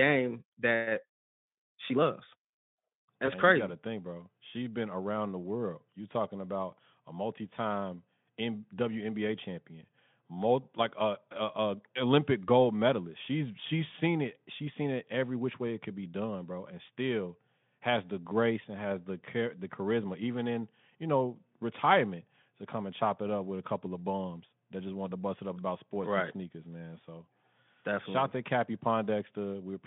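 A speech clip with one dropout from VoIP packet loss concealed by the speech codec, at 3.25 to 3.31 s, just before "and crazy". About 20 ms is missing, which fits one lost frame. The decoder extends the last pitch and filter. The sound smears into a brief, fading buzzy tone or coloured noise.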